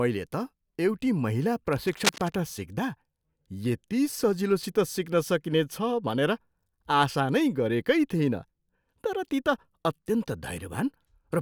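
From 1.67 s to 2.37 s, a burst of cable scratch noise sits over the speech: dense, irregular crackling and rustling lasting about 0.7 s, only a few decibels below the speech itself, so it is clearly audible rather than buried. The likely cause is a worn cable, connector or control being moved, with the contact resistance jumping about rapidly and injecting uneven bursts of noise into the signal path until the contact settles again.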